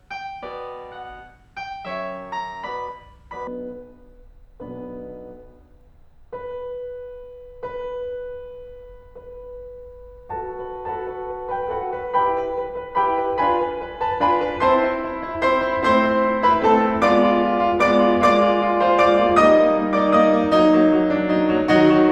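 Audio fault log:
0.0–3.47 s: audio read two samples at a time (double speed). For the opening 3.47 s the music plays at 2.0x speed and an octave high, because each pair of samples has been taken as a single frame, as if the data were stereo or twice as wide. On a spectrogram every partial sits twice as high, and the waveform looks time-compressed and densely packed.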